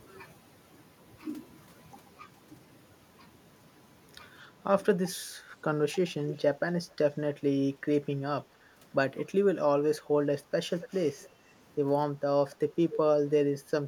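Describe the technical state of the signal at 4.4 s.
At 4.4 s the speech signal is intact, with no audible fault at that moment.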